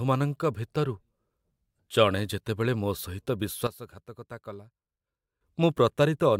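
It's a speech clip with a sudden gain jump: at 3.67 s the whole level drops by about 12 dB in one step, with the voice and the background noise falling together, and at 5.41 s it snaps straight back up. There's no fade either way, so it's a hard switch rather than anyone moving away from the mic. The likely cause is a digital gain setting being changed and then restored without any ramp.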